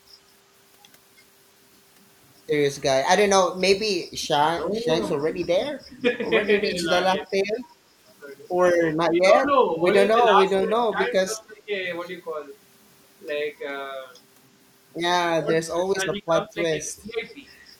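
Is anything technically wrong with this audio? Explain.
Yes. The speech repeatedly dips by roughly 10 to 20 dB at 3.99–4.29, 4.64–4.89, 5.31–6.07, 6.74–7.31, 9.08–9.79, 10.2–11.71 and 15.38–17.22 s. This is likely speech suppressed in double talk, where an echo canceller confuses talk with loudspeaker echo and attenuates both.

From 7.76 to 7.98 s the room sound drops by about 8 dB and then returns. This is background gated by the echo canceller, which clamps the microphone while the loudspeaker plays.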